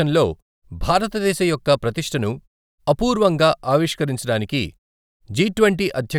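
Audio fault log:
No faults detected in this speech clip.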